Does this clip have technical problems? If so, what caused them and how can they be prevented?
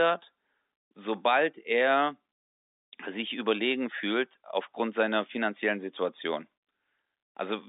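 No, there is no technical problem here; the speech simply carries the narrow band of G.711 telephone coding, roughly 300 Hz to 3.7 kHz with nothing above 3.8 kHz, which is how a normal fixed-line call sounds and needs no prevention.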